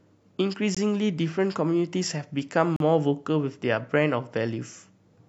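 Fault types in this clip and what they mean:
Gap between stream segments: two segments' timestamps fail to meet, so the player inserts pure silence and the speech simply stops, with no audio lost. In this clip there is a 20 ms hole at 0.75 s and a 38 ms hole from 2.76 to 2.80 s, about two seconds apart, which fits 2-second segments. On a waveform each shows as a flat line with abrupt edges. On a spectrogram it is a clean vertical blank band across all frequencies.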